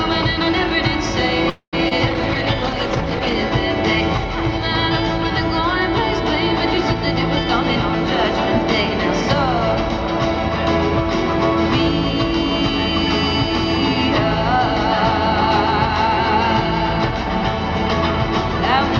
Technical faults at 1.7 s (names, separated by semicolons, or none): call audio freeze